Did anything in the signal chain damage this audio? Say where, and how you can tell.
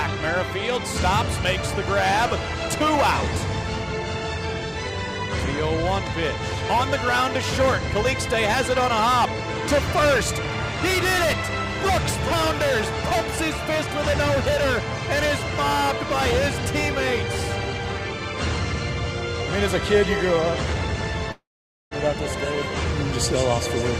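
Yes. At 21.31 s the sound turns into a fading buzz, then 0.49 s of near silence until 21.94 s, when it resumes with 0.6 s gone. A spectrogram shows a smeared tail, then an empty band: a long network dropout, likely lost packets the receiver concealed briefly.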